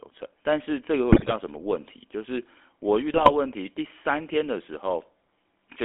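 GSM full-rate codec coding runs throughout this speech recording, narrowing it to roughly 250 Hz to 3.4 kHz and adding the buzzy, gravelly roughness of a pulse-excited vocal-tract model at around 13 kbps. GSM bit errors strike from 1.12 to 1.33 s and again from 3.14 to 3.33 s, where corrupted filter, pitch and gain values make the decoder squawk and gargle, the first burst sounding more severe.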